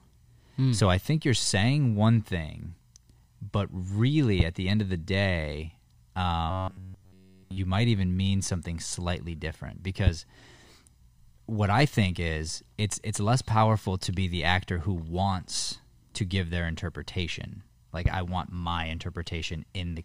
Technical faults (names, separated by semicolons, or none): loud pop; robotic sound from repeated short buffers